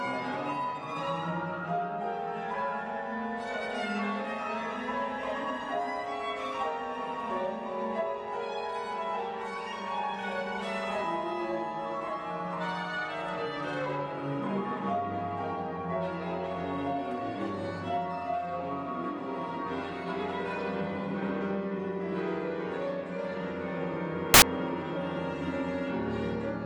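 At 24.34 s the audio turns into a burst of loud, harsh broadband noise that lasts until 24.42 s, about 80 ms. This is a case of samples built from the wrong bytes: for that stretch each sample was assembled from its bytes misaligned or in the wrong order. The rapidly varying low-order bits ended up as the most significant part of each value. The result is broadband hiss at high level in place of the original signal.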